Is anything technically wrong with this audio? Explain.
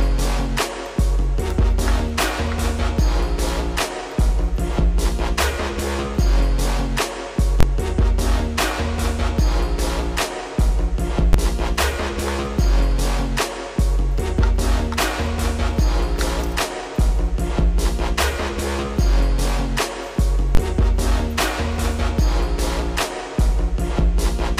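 Yes, there are three bursts of invalid numbers at full scale: 7.60 to 7.63 s, a single hit at 11.33 s, and 20.55 to 20.57 s. A calculation blew up into infinite or invalid values, which got pinned to the maximum level for a whole block. The 23 ms spans fit a 1024-sample block and give a loud pop at each edge with nothing between. The 12 ms one fits a 512-sample block and lands as one sharp bang.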